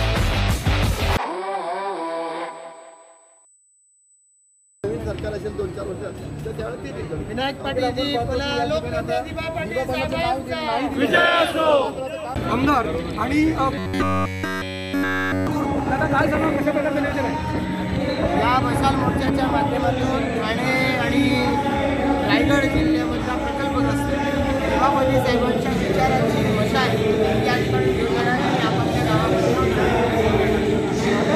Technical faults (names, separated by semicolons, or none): robotic sound from repeated short buffers